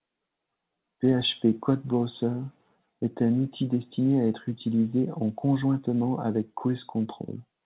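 No technical faults occur at any point in the speech, which comes through a G.711 mu-law call path at 64 kbps with nothing above 4 kHz.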